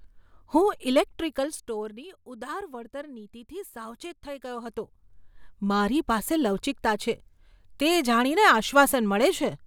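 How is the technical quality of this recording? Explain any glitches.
One glitch is audible in the speech. From 0.90 to 2.09 s there is zipper noise. The level falls roughly 15 dB in unsmoothed steps, around fifty a second. Each step clicks, producing a fast ticking zip.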